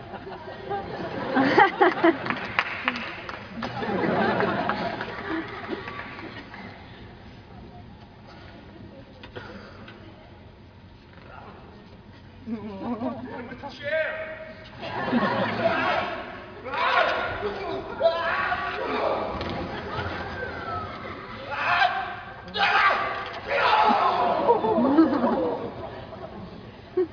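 Nothing technical stands out in this audio; it comes through without any dropouts, glitches or other trouble worth flagging.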